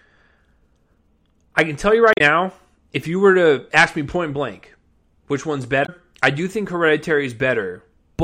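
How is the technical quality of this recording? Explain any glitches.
There are two short glitches, both from damaged data in a compressed stream. At 2.10 to 2.21 s, right after "I can tell you", and at 5.82 to 5.89 s, between "point blank which one's" and "I do think", corrupted bytes throw the decoder out of sync while it hunts for the next frame, leaving a brief chirp, squawk, click or short hole.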